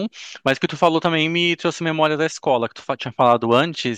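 A gain stage is driven past what it can pass, so the peaks are cut flat. The result is hard clipping at 0.48 to 1.07 s, with peaks about 3 dB over the limit; again from 2.04 to 2.06 s, about 1 dB over; and from 3.21 to 3.61 s, about 2 dB over. The squared-off tops add high harmonics, heard as crackly fuzz on loud speech, roughest in the first stretch and a brief tick at 2.04 s.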